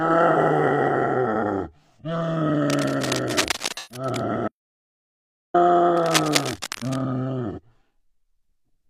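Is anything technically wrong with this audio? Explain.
Yes, there are three kinds of fault: AAC frame loss with concealment, cable scratch noise and a dropout to silence.

AAC frame loss with concealment happens at 0.31 to 0.36 s, 3.74 to 4.05 s and 7.52 to 7.59 s. The short gaps of about 43 ms fit a single lost frame, and the 128 ms gap fits three in a row. The decoder rebuilt the missing stretches from the last good spectrum with scrambled phase, so they sound smeared, noisy or phasey. On a spectrogram each shows as a blurred, featureless block where the fine detail stops. On a waveform the texture turns noise-like.

Cable scratch noise runs from 2.67 to 4.21 s at about 10 dB below the signal, and again from 5.96 to 7.01 s at about 5 dB below it. It is heard as dense, uneven scratching and rustling laid over the sound. The likely cause is a worn cable, connector or control being moved, so that its contact resistance jumps rapidly. 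On a spectrogram it appears as ragged broadband vertical streaks. On a waveform it shows as irregular spiky bursts riding on the signal.

The audio dropout to silence lasts from 4.48 to 5.54 s, about 1.06 s. The sound cuts off abruptly and returns mid-flow, and the gap is silent with no room tone at all. The likely cause is a lost input, with silence written in its place. On a waveform it is a flat line, and on a spectrogram it is a blank column with hard edges.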